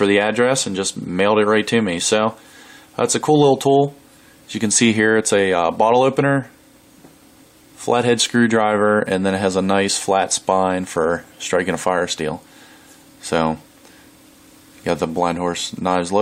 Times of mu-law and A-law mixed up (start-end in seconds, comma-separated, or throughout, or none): none